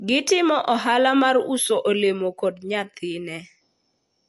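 From start to finish the speech has a dull, watery quality, with nothing above about 11.3 kHz and a plainly audible swirl. That's likely MP3 compression, and the damage fits a low bitrate around 48 kbps, where the encoder cuts the treble and drops weak detail that flickers frame to frame.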